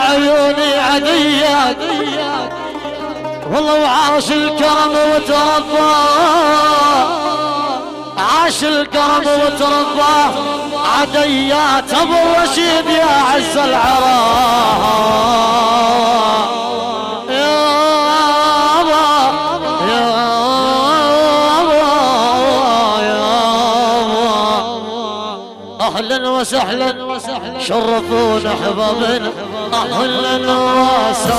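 A doubled audio track appears at 29.64 s and runs to the end of the clip. From that point a second, full-band copy of the sound trails the original by around a fifth of a second, roughly 5 dB quieter, with no decay or room colouring. It cuts in abruptly rather than fading up. The likely cause is the same signal reaching the mix twice, once through a slower capture path or an edit that left two copies offset in time.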